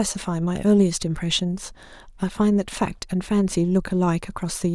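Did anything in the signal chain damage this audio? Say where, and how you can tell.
No, nothing in the signal chain audibly damaged this speech recording. None of the stages between capture and playback leaves a mark that can be heard.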